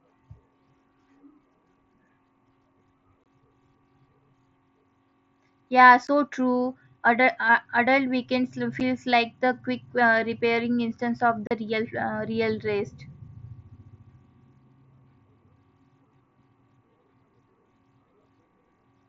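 Abrupt dropouts cut the speech at 3.24–3.26 s, 6.07 s, 8.8 s after "uh adult weekends", and 11.47–11.51 s after "uh repairing instance of". This is unconcealed Bluetooth headset packet loss: voice packets between headset and phone went missing and were replaced with silence or an idle pattern.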